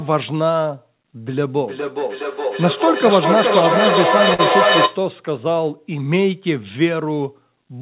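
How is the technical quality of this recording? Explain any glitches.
The recording has two glitches, heard over telephone-band audio with nothing above 4 kHz, which fits a G.711 mu-law call codec.

From 1.42 to 5.09 s there is a feedback echo between two devices. The speech keeps returning about every 0.4 s, thinner and ringing, and at its loudest it sits about 1 dB above the speech itself. A second device in the room replays the call and its microphone feeds it back, and neither echo canceller removes it.

From 4.34 to 4.41 s there is a short stall from a late packet. One sound is held unnaturally long for 46 ms, with nothing lost, because the jitter buffer ran dry and stretched the last audio until the packet arrived.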